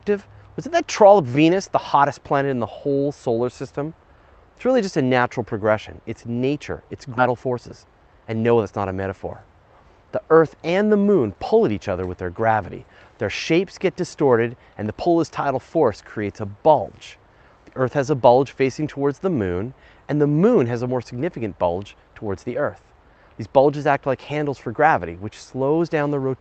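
At 7.17 to 7.19 s the audio makes a skip ahead: about a second of sound was discarded while later audio was already queued, so playback jumps straight across with no silence filling the join. Unlike a dropout, there is no hole, just a seam where content is missing.

Right after, from 7.27 to 8.72 s, a jitter buffer speed-up trims the backlog by cutting out tiny pitch-period pieces again and again, about a fifth of a second in total. The sound runs roughly 13% fast and feels hurried, yet its pitch stays put, unlike a sped-up tape. All of this passes through an Opus call path limited to an 8 kHz bandwidth.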